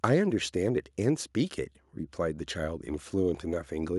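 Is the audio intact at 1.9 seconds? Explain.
Yes, at 1.9 s the speech is intact, with no dropout, click, distortion or other fault to be heard there.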